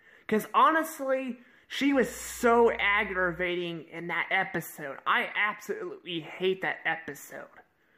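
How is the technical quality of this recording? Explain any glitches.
There's one glitch worth flagging: a stretch of mains hum from about 1.91 to 3.48 s. A ground loop or nearby transformer is bleeding the 60 Hz power line into the signal, so you get a steady low drone sitting well under the main sound, then it drops away.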